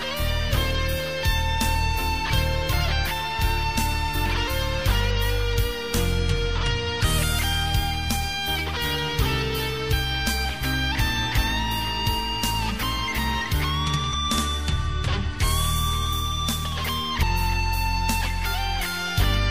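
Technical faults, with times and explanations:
14.13 s and 17.22 s, damaged data in a compressed stream: two brief blips, each lasting just under 20 ms. Corrupted bytes in the encoded stream made the decoder misread those frames and lose sync until it found the next valid frame header.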